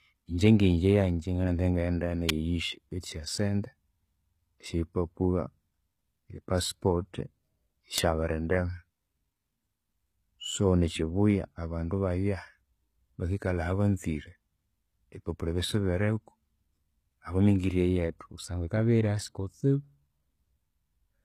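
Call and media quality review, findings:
HE-AAC compression, whole clip. Speech treble extends to about 14.9 kHz, then nothing above. Codec damage plainly audible: s sounds gritty and metallic, not simply dull. Likely component: HE-AAC encoder at a rate consistent with about 20 kbps. Upper band is rebuilt by spectral band replication, lower bands copied upward under a coarse envelope. Distinct from a plain low-pass: treble is present but synthetic, harmonics misaligned across the crossover.

Electrical switching spike, 2.29 s and 7.98 s. Each is a sharp snap of about 10 ms or less, sitting on top of the speech, which carries on uninterrupted beneath it. Likely cause: a nearby switch, motor or static discharge arcing, with the audio line picking it up. Distinct from a dropout or codec glitch: nothing is removed, the click is added energy.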